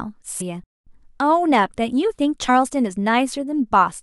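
At 0.40 to 0.42 s the speech jumps forward by roughly 300 ms. This is compressed frames skipped: a run of encoded frames, about ten by the size of the jump, never reached the output, so the decoder resumed further along. The same fault recurs at 2.48 s with a smaller jump of around 70 ms, consistent with about three frames lost.

Between 0.64 and 0.87 s the audio cuts out completely for 229 ms. This is a playback stall. The output falls silent in mid-flow. The likely cause is the player running short of buffered data or its audio thread being blocked until it could refill and resume.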